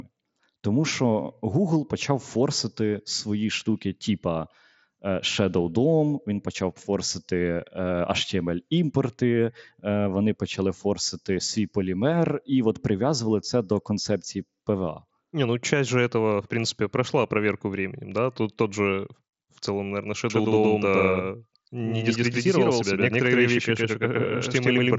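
At 20.3 s a doubled audio track cuts in abruptly and runs to the end: a second full-band copy of the speech, roughly as loud as the first, trails it by about a tenth of a second, so every syllable gets a dry, slapback-like echo with no room decay. The likely cause is a second, slower capture path or two misaligned copies in an edit. On a waveform each onset appears twice, and a spectrogram shows every event repeated with a fixed lag, both stopping at the headset band's upper edge near 7.7 kHz.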